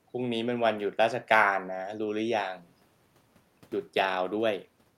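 No technical faults can be heard anywhere in this clip.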